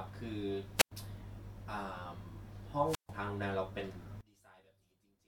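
Hiss swells briefly at 0.76 s, then the sound drops into near silence for about 101 ms and returns by 0.92 s. The same happens from 2.84 to 3.14 s, with a 141 ms hole. Both are wireless microphone squelch dropouts: the FM radio link faded until the receiver's squelch muted its output.

From 4.21 s to the end, the speech falls by about 28 dB, leaving only a faint residue. This is likely one channel inverted. With reversed polarity on one side, the content shared by both channels cancels when they are combined to mono.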